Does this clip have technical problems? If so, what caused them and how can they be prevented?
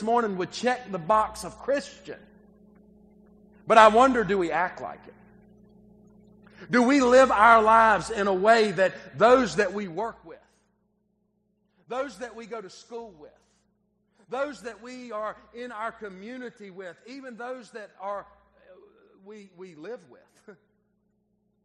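Yes. Zipper noise runs from 9.6 to 10.4 s as the level drops by roughly 15 dB. The drop comes in 2 dB steps, around fifteen per second, with no smoothing between them. Each jump clicks, giving a ticking zip. Ramping gain per sample prevents it.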